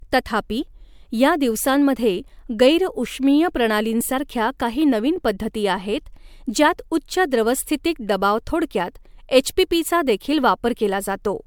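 From start to finish the speech carries generation loss, swirly and hollow with soft, smeared consonant attacks, worse than a single 128 kbit/s MP3 pass would give. It likely went through MP3 encoding and decoding a few times, with each re-quantisation stacking more noise and spectral holes.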